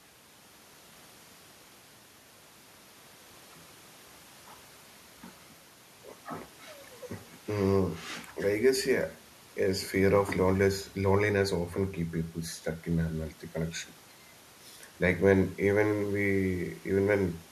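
Listening through this speech recording, nothing stood out as a technical problem at any point.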